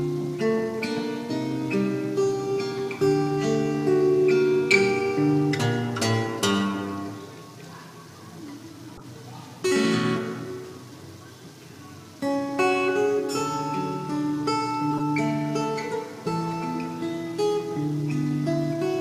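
Three short blips cut through the sound, from 2.77 to 2.80 s, 8.97 to 9.03 s and 14.91 to 15.01 s. Each is a corrupt frame decoded: damaged compressed data played anyway, scattering energy at wrong frequencies. The last burst is longer and clearly louder, suggesting several frames hit.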